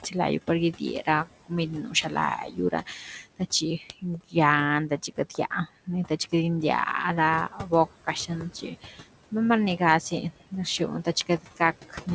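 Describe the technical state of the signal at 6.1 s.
At 6.1 s the signal sits inside a stretch of speech cut by the noise suppressor, from 4.89 to 6.33 s. Weak speech components were classified as noise and attenuated by up to about 14 dB, making roughly a fifth of a second of speech sound swallowed or faint. Noise suppressor artifacts run throughout: the steady background is pulled down by about 16 dB per frame, so the residual noise dips between words and returns under them.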